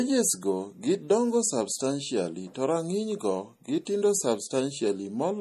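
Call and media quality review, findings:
MP3 compression throughout, likely a starved low-bitrate encode, consistent with around 40 kbps. Treble cut flat at 14.1 kHz; weak spectral lines zeroed and switching frame to frame, so speech sounds plainly watery and swirly, with smeared attacks and chirpy s sounds.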